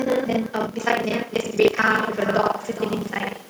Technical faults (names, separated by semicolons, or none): buffer tearing; echo with no canceller; time-stretched section